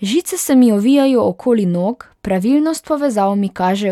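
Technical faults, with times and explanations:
No technical faults are audible anywhere in the speech.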